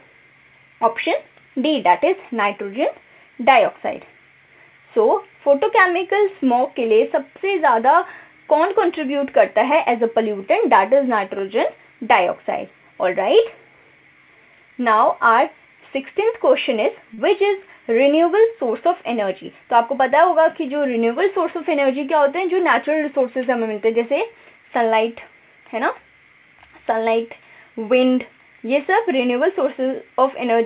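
A short stall from a late packet occurs at 17.14 to 17.20 s. A packet failed to arrive on time and the jitter buffer ran dry, so the receiver held the last sound for about 36 ms until the data turned up, then resumed from the same point. Nothing is lost, but that moment lingers slightly too long with a faint buzzy, dipping quality, and everything after it sits about 36 ms later.

A jitter buffer speed-up follows at 19.20 to 19.65 s. The buffer had built up more audio than its target, and the receiver trimmed it back by cutting out tiny pitch-period-sized slices in quick succession, around 40 ms in total. Over that stretch the sound plays at 107% speed while keeping its pitch, giving a brief hurried, slightly compressed feel. All of it is heard through the narrowband G.711 mu-law call path, with nothing above 4 kHz.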